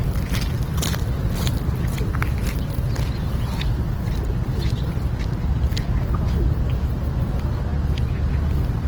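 Everyday sounds, heard throughout with plainly audible Opus compression at a likely low bitrate near 16 kbps: grainy, noise-filled tones, with band-filled texture on a spectrogram extending up to about 20.2 kHz.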